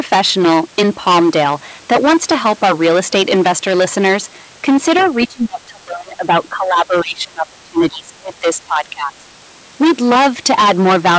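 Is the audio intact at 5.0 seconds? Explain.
No. Hard clipping runs through the whole clip, including 5.0 s. The sound is overdriven by about 20 dB, flattening roughly one sample in seven into a harsh, fuzzy crackle. From 4.97 to 5.09 s, the other side's voice leaks through as a faint second voice far below the speech, likely loudspeaker sound that the echo canceller failed to remove.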